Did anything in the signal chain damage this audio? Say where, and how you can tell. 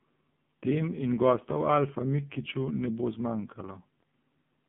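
Yes: AMR narrowband mobile codec, throughout. Nothing survives above 3.7 kHz, and the sparse-pulse vocal-tract model leaves a heavily buzzy, synthetic voice, which fits roughly 5.9 kbps.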